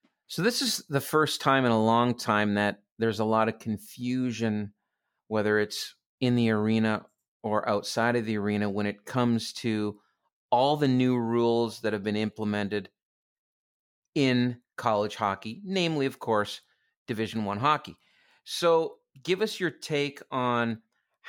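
No audible technical faults occur anywhere in the recording.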